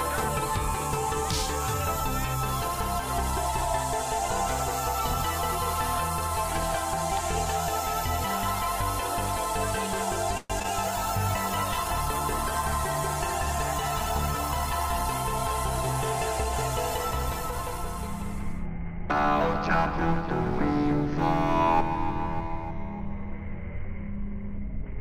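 At 10.37 s the audio stalls for about 0.14 s. The last sound carries on as a fading buzz-like continuation that briefly reaches silence for about 10 ms, and then playback resumes where it left off. This is a call audio freeze, likely caused by packets arriving late and the jitter buffer running dry. Nothing is lost, but about 122 ms of delay is inserted into the stream at that point.

Right after, at 10.60 s and again at 10.62 s, there are two short concealed packet losses back to back. Each removes about 20 ms of real audio, and the receiver patches each gap with a brief extrapolation of the preceding sound before crossfading back. The result is a quick smear or wobble just after the freeze, where a short transient in the material may drop out.

From 10.87 s to 15.11 s there is a call bitrate drop. The encoder falls from 128 kbps to 20 kbps and stays at that floor for about 4.2 s. At that rate Opus quantises the spectrum coarsely and narrows the audio bandwidth, so the sound turns muffled and watery, with the upper frequencies missing. 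Clarity returns once the rate climbs back after 15.11 s.

Between 16.90 s and 17.78 s there is a jitter buffer speed-up. The buffer is holding more audio than its target, so the receiver trims short pitch-period-length pieces repeatedly, around 50 ms in total. Playback runs at about 106% speed with pitch unchanged, and the stretch sounds slightly rushed before normal pacing resumes.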